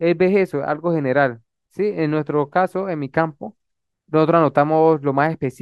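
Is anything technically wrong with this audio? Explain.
No, the speech signal is technically sound, with nothing in it that points to a fault anywhere in the recording or playback chain.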